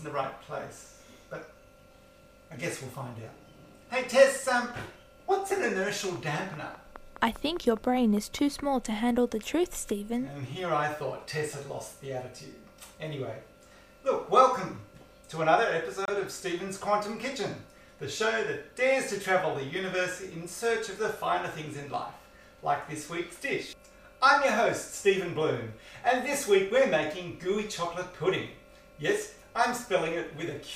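From 6.16 to 8.60 s there's a train of clicks, about fifteen regular ticks at 4.9 per second, poking a little above the sound, likely outside interference. At 16.05 to 16.10 s a corrupt frame decoded gives a short chirp, blip or burst of noise, with a couple of damaged frames misplacing energy at the wrong frequencies.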